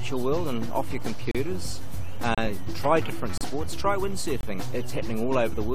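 At 1.31, 2.35, 3.38 and 4.41 s you get a gap between stream segments: a hard-edged hole of silence, about 35, 30, 34 and 25 ms long. They land roughly once a second, which fits 1-second segments whose time stamps don't quite meet, so the player pads each seam with silence. Nothing is actually lost; the sound just stops dead, then picks up where it left off.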